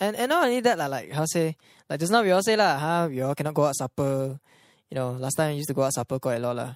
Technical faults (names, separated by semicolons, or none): none